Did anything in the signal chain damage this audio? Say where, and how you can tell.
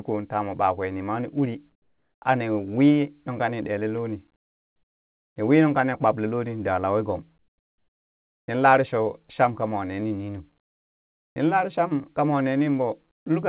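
Yes. The call processing has put comfort noise in place of the background in the pauses. This happens at 1.72–2.22 s after "ɓakwe nima ni uri", at 4.36–5.36 s before "ni wii nungka ni", at 7.38–8.48 s, and at 10.6–11.36 s between "kamwa ne ni nunu" and "nin lare". Each gap goes flat and featureless, and drops by about 7, 14, 12 and 25 dB. The likely cause is discontinuous transmission. The sender goes silent, and the receiver plays synthetic noise until the speech returns.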